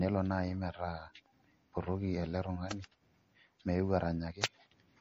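From start to end the speech sounds plainly watery and swirly, with smeared onsets and a treble ceiling at 15 kHz. This is likely MP3 compression, fitting a low bitrate around 40 kbps. A spectrogram shows that flat cutoff and weak upper bands flickering between frames.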